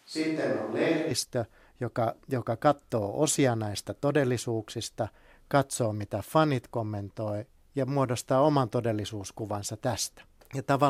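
A switch to a distant microphone is already under way when the clip begins and lasts until 1.11 s. For that first second the voice sounds roomy and hollow, thin in the low end, around 5 dB quieter, with background noise sitting roughly 35 dB below the speech. The likely cause is that the close microphone dropped out or went unused, leaving only a far pickup. At 1.11 s the sound snaps abruptly back to a close, full voice.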